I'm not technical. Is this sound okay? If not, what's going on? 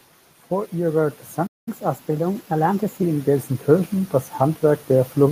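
No. From 0.49 s to the end, automatic gain rising slowly lifts the level, so the speech and the background noise swell louder together.

At 1.46 s there is a playback stall: the sound cuts to silence for about 0.2 s, likely because the player ran short of data, and resumes at 1.68 s.

From 1.68 to 3.03 s comes catch-up at higher speed. The speech runs 1.15 times fast and about two semitones higher while the player recovers lost time.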